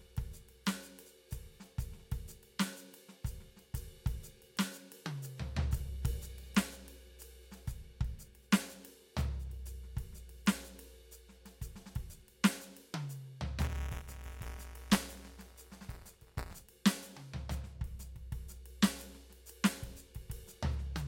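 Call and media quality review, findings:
Buffer tearing, 13.61–16.60 s: steady rattling buzz at 172 Hz over the music. Playback write and hardware read pointers crossing each period, fits a 256-sample buffer. A small slice of each buffer replays audio from about 10 ms earlier, hard-edged on both sides.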